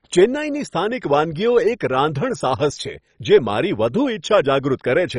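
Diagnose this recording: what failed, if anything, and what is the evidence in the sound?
The codec stage failed, most likely MP2 compression at a very low rate that fits about 32 kbps. Starved of bits, the encoder switches off its upper sub-bands, leaving nothing above 10.3 kHz, and coarsely quantises the rest, so the speech sounds dull, gurgling and granular throughout.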